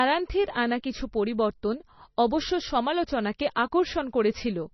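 Heavy low-bitrate coding, likely MP3 compression at around 24 kbps, starves the encoder of bits throughout, so it discards everything above 5.9 kHz and drops weak frequency lines frame by frame. The speech sounds dull and watery, with swirling, metallic fizz on sibilants.

At 3.38 s a pre-echo appears: the codec spreads quantisation noise across a whole block, so noise meant for a sharp attack leaks about 12 ms ahead of it. A brief hiss precedes the onset, which sounds softened and smeared.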